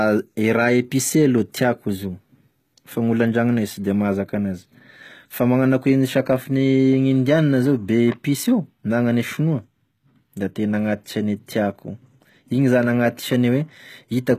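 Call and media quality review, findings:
Likely HE-AAC compression throughout, speech upper band rebuilt by spectral band replication rather than coded; sibilants gritty, lispy, treble unnatural, harmonics misaligned across crossover, plainly audible damage consistent with roughly 20 kbps; nothing above 14.9 kHz.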